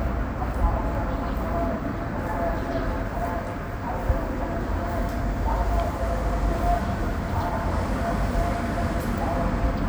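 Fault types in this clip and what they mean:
No technical faults can be heard anywhere in this recording of sounds. Nothing in it stands out as a fault to describe.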